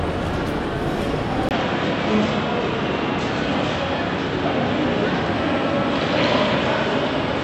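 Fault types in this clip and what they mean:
Input switched to a poorer device: at 1.49 s a 20 ms waveform gap, then the spectrogram stops at 7.9 kHz with new noise about 35 dB down, likely another microphone.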